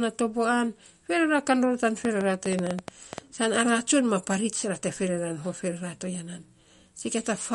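Right from the start the speech has plainly audible MP3 compression damage. It's watery and swirly, and everything above 11.2 kHz is simply gone. That's what you get when the encoder is short of bits, cuts the treble and drops the weak detail. The sound points to a low bitrate of around 48 kbps.

From 2.05 to 3.19 s there's a train of clicks: about ten pops at an uneven pace, averaging roughly 8.8 per second, and they jump well above the speech. It's likely interference from nearby gear or a faulty connection or power supply.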